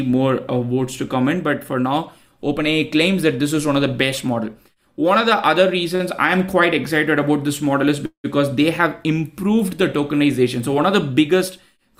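At 5.95 to 6.02 s there is a short stall from a late packet: the sound is held for about 44 ms with a slight buzz or dip, then resumes exactly where it left off. Nothing is skipped; playback simply runs 44 ms later from then on.

At 8.06 to 8.26 s a call audio freeze follows, likely from packets delayed in transit. The last sound smears into a fading buzz or hiss lasting 182 ms, the final 100 ms silent, before the audio picks up intact. The longer decay into silence distinguishes it from the brief stall.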